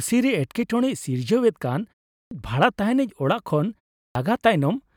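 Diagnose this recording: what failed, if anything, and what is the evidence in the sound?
Clipped start after a pause at 2.19 s and 4.03 s: the playback device sleeps through brief silences and wakes late, swallowing 0.12 s of each onset.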